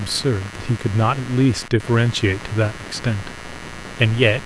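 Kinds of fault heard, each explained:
Computer activity noise: a buzzy, chirping hum of around a hundred pulses a second sits under the speech throughout, about 15 dB down, likely from computer load shifting the audio ground.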